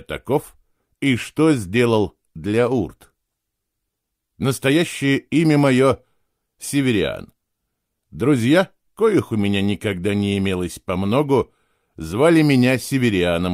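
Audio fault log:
No faults heard.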